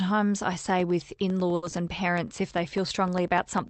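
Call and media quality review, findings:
Periodic USB or driver dropouts: regular ticks from 0.70 s to the end, every 0.1 s, only audible under speech. Something on the USB bus or audio driver blocks on a 100 ms cycle, and each gap drops out to silence. Check for a background task polling at that rate.

Short stall from a late packet: speech held and stretched around 1.55–1.64 s, about 70 ms of filler with slight buzz or dip. Jitter buffer ran dry, receiver held the last sound, then resumed at the same spot with nothing lost. Playout delay grew by roughly 70 ms.

Short concealed packet loss: brief smear/wobble right after, 1.70–1.81 s. About 20 ms never reached the Opus decoder in time. Concealment extended the previous sound and blended back, adding only a few ms. Top end stops at 8 kHz, which fits Opus at about 24 kbps.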